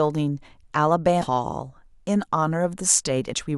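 At 1.21 to 1.27 s and again at 3.33 s the speech jumps forward, with compressed frames skipped. At each point, about a fifth of a second of audio never plays, which points to roughly ten 20 ms frames lost from the stream or rejected as corrupt by the decoder. Each time, the speech resumes further along.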